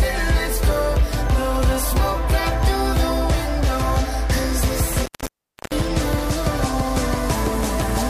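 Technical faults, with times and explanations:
4.93–5.83 s, intermittent contact: a loose connection opens for about 0.66 s, cutting the sound with crackle at both edges rather than the clean silence of a digital dropout.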